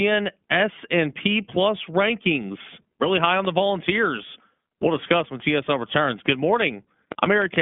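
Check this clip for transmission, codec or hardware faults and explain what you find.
A codec fault runs through the whole speech clip. The sound is thin and boxed-in, with nothing above about 3.5 kHz and little below 150 Hz, and the speech carries a plainly audible rough, slightly synthetic grain. This is the iLBC codec, a narrowband VoIP coder that encodes the excitation of each short frame independently of the previous one. The coarse, frame-by-frame texture fits 20 ms frames at around 15 kbps.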